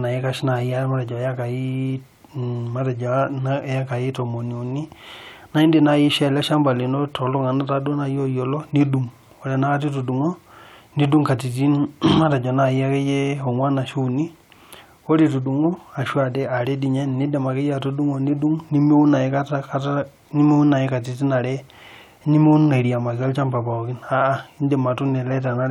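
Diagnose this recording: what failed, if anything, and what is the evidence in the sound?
Nothing in the signal chain failed: the speech signal stays continuous and stable throughout, with no audible dropouts, distortion, level jumps or timing disturbances at any stage.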